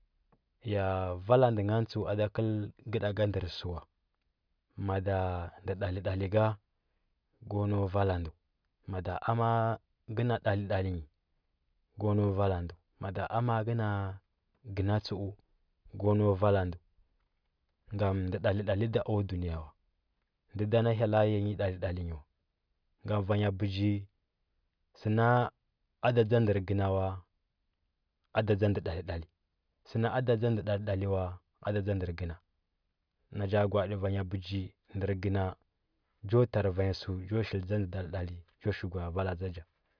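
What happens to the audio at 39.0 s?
Nothing goes wrong at 39.0 s; the speech carries on there without any dropout, glitch or distortion.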